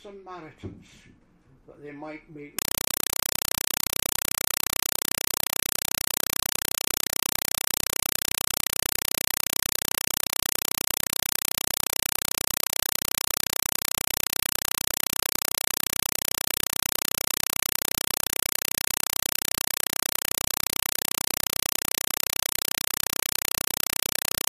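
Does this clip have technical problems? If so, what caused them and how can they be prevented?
Yes. A compressed stream is played as audio from 2.59 s to the end: an AC-3 bitstream, likely 192 kbps, is treated as ordinary samples, giving loud chattering static of 4 ms noise bursts repeating 31.25 times per second. Prevent it by decoding the stream or setting the player to output PCM.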